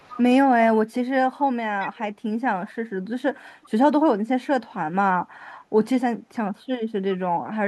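Echo leak at 0.0–0.21, 1.8–2.02, 2.66–2.71 and 3.62–3.7 s: a faint copy of the speech trails by 384 ms, likely loudspeaker pickup an echo canceller failed to remove. Speech suppressed in double talk at 6.11–6.45 s: the voice drops by roughly 40 dB for about 300 ms, likely from a canceller muting both talkers.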